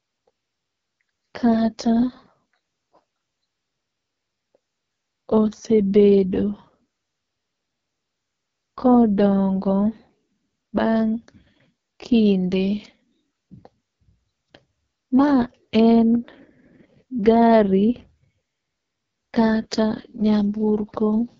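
From start to finish the speech passes through the AMR wideband (HD Voice) codec at heavy damage, rough and raspy in a way that fits its lowest 6.6 kbit/s mode. A spectrogram shows coarse, smeared harmonics, a noise-filled top band and nothing above 7.5 kHz.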